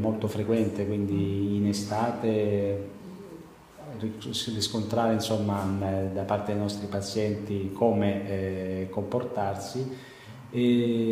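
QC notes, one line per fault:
No technical faults are audible at any point; the signal holds steady and continuous with no interruptions or disturbances.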